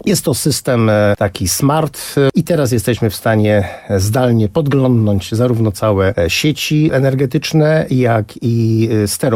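No technical faults are audible.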